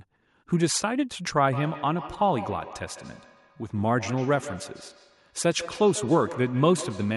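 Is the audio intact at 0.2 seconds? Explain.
Yes, the speech is intact at 0.2 seconds, with no fault audible at that moment.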